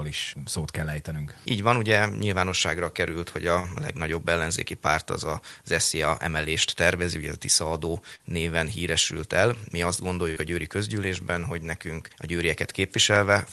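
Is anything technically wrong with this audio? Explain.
Yes. Packets were lost on the call path three times; the codec's audible band limit near 12 kHz is not a fault.

A burst of packet loss at 3.59 to 3.70 s and 10.31 to 10.39 s made the receiver extend the last sound for about 48 ms, giving a fading buzz or hiss before the audio resumes with about 40 ms missing.

A short concealed packet loss at 8.15 to 8.22 s was patched by continuing the preceding sound and blending back, heard as a brief smear or wobble.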